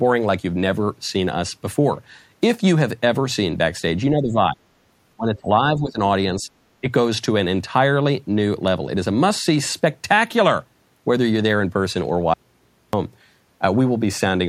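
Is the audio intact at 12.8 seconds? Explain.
No. At 12.8 seconds the speech has vanished: from 12.34 to 12.93 s, about 0.6 s, it cuts off abruptly and only a low mains hum remains, roughly 40 dB below the normal level, before the speech snaps back. This is an audio dropout to a faint residue. The likely cause is a momentary loss of the wanted signal while the downstream path stayed live, so the open input picked up hum instead of falling to silence.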